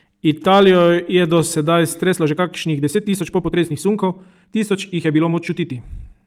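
A speech recording with two kinds of fault. Hard clipping appears from 0.48 to 0.90 s, where the peaks are driven about 3 dB past what the signal path can hold, and again briefly from 1.35 to 1.40 s at about 1 dB over. On a waveform the peaks are sliced flat against a ceiling. On a spectrogram they show as vertical smears of energy reaching up into the high kHz. By ear the first stretch is a gritty crackle, and the second is a shorter, fainter tick of distortion. From 2.04 s to the end the speech runs about 1.61 times faster with its pitch unchanged. It sounds rushed, with a sudden change of pace. That points to a time-stretched section, most likely squeezed by software that dropped short slices to fit a shorter length. On a spectrogram the syllables and pauses pack closer together, with small discontinuities at the splice points. The harmonic spacing stays the same as before the change.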